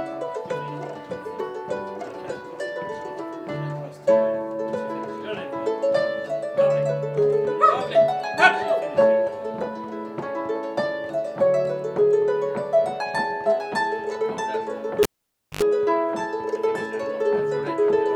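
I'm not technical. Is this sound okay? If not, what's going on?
No. Cable pulled and plugged in at 15.03–15.62 s: a live lead comes out (pop, half-second silence), hums 50 Hz while reconnecting, then pops back.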